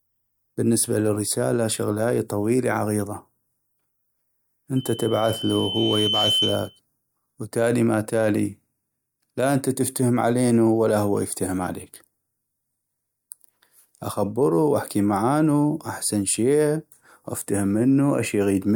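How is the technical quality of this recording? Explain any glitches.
The recording has one clear fault. From 4.76 to 6.80 s, loudspeaker feedback squeal appears: the microphone re-amplifies its own loudspeaker output, so a 3 kHz tone swells over roughly a second and a half to about speech level.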